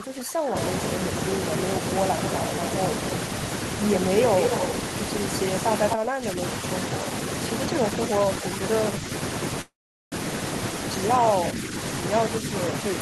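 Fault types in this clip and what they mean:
Speech suppressed in double talk: The level of the speech sinks while talk continues underneath, most likely because an echo canceller heard both sides at once and turned everything down. It happens four times: from 0.00 to 0.56 s, dipping by about 20 dB; from 5.94 to 6.39 s, by about 15 dB; and briefly at 8.99 to 9.07 s and 11.51 to 11.73 s, by about 5 dB. Unlike a freeze, no time is inserted; the audio simply gets quieter.
Echo leak: A short, delayed copy of the speech is heard around 5.90 to 5.95 s, arriving 247 ms behind the original and only about 5 dB quieter. This is likely sound from a far-end loudspeaker that slipped past that side's echo canceller and came back down the line. The copy is a distinct repeat at a fixed delay, not the smooth tail of room reverberation, and here it is a single brief scrap.
Call audio freeze: From 9.61 to 10.14 s, the audio stops. 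The last sound trails off briefly, then about 410 ms is silent before the speech picks up where it left off. This is likely packets arriving late and the jitter buffer running dry. About 505 ms is inserted in total, and none of the speech is lost; everything afterwards simply runs half a second later. This sets it apart from a dropout, where sound goes missing.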